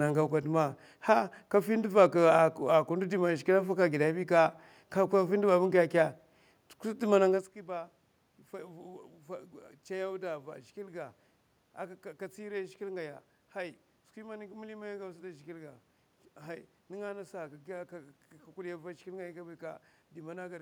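No technical faults can be heard anywhere in this recording.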